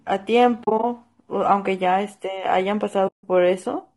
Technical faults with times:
0.00-3.97 low-delay AAC compression
0.63-0.84 AAC frame loss with muting
3.07-3.24 AAC frame loss with muting

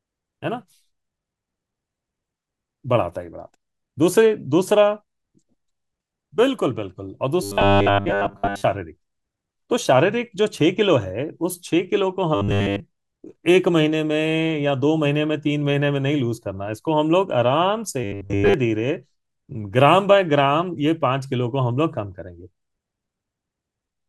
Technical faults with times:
7.42-8.63 robotic sound from repeated short buffers
12.35-12.80 robotic sound from repeated short buffers
18.04-18.54 robotic sound from repeated short buffers

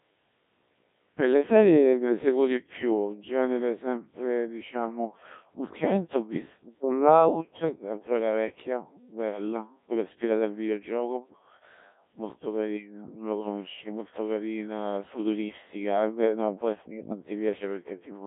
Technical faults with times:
0.00-18.26 Codec 2 vocoder

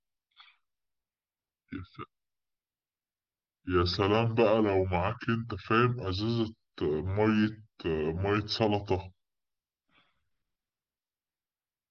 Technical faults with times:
0.00-11.90 wrong sample rate

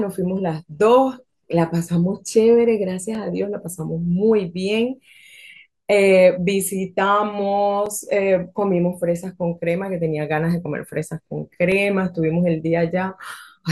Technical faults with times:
3.15 block of digital silence
7.86 block of digital silence
11.72 block of digital silence

